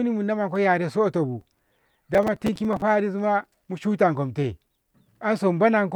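From 1.41 to 2.82 s, after "munamonko yaressoto bu" and before "ma mushukomte", the speech carries processor overload crackle: around forty buffers of about 5 ms each miss their deadline and replay stale audio with hard edges, producing a gritty tearing burst.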